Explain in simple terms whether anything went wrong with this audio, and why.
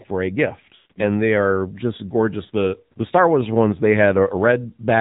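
Two things went wrong. The whole recording has passed through the AMR narrowband mobile codec, the speech coder used on older 2G and 3G phone calls. It keeps nothing above 4 kHz, so the voice sounds muffled and thin. It also rebuilds speech from a simple model of the throat and mouth instead of storing the actual waveform. At the low quality setting used here, that gives the voice a plainly audible buzzy, artificial edge all the way through.

The second problem is lost AMR speech frames, which happens when radio errors corrupt small chunks of the call. The decoder can't use a damaged chunk, so it fills the gap by repeating the last good sound while fading it down. Between about 0.76 and 1.00 s, roughly 180 ms of sound is missing, with the longest unbroken gap about 140 ms. There the voice smears into a drawn-out, fading tone before recovering. A shorter 40 ms loss at about 2.46 s causes only a brief dip or warble.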